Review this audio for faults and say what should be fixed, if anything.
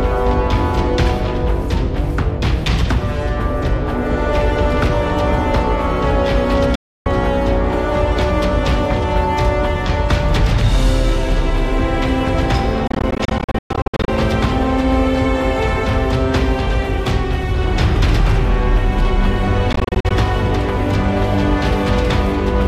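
Bluetooth dropouts at 6.75–7.06 s (about 0.3 s of silence), 12.87–14.08 s (about 0.6 s lost in gaps up to 116 ms) and 19.73–20.11 s (gaps up to 44 ms). The output goes silent and then resumes as though playback had continued. The likely cause is wireless audio packets arriving too late and being discarded. To prevent this, keep the headphones close to the source with a clear line of sight, and reduce 2.4 GHz interference or use a wired connection.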